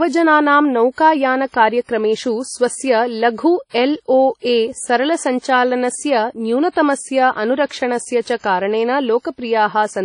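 A short speech recording, and the whole thing sits under a layer of what is likely WMA compression: there's nothing above about 10.1 kHz, the top end sounds washy and ringing, and a hiss rises and falls with the talker. That degree of plainly audible damage fits a low bitrate somewhere around 32 kbps, where the transform coder has to throw away weak detail and spread its quantisation noise across long blocks. On top of that you get pre-echo, five times: at 0.92 s with about 58 ms of smear ahead of the attack, at 3.69 s right after "स्वस्य लघु" (about 45 ms), at 5.39 s (35 ms), at 6.70 s (56 ms), and at 9.21 s (39 ms). Each time a sharp onset lands late in a coding block, so the noise that the loud part earned leaks into the quiet just before it. The result is a brief hiss leading into the attack, and the attack itself sounds soft and blurred rather than crisp.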